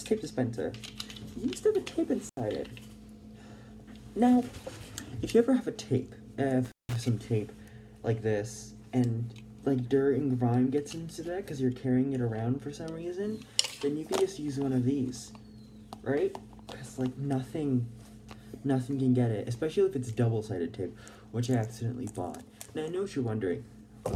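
At 2.27 to 2.40 s and again at 6.65 to 6.96 s, an intermittent contact briefly opens the signal path for 79 ms and then 173 ms. The sound cuts out with crackle at each edge, which sets it apart from a clean digital dropout.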